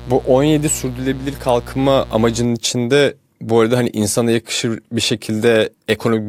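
From 0 to 2.45 s, before "içinde bu arada hani", a 60 Hz mains buzz rasps. Switching spikes push harmonics into kilohertz, unlike smooth hum.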